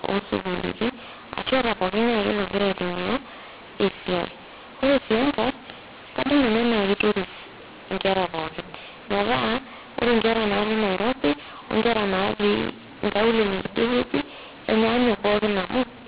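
Throughout, mu-law and A-law are mixed up: telephone speech coded as mu-law is decoded as A-law, scrambling levels into harsh distortion, with pauses filled by noise.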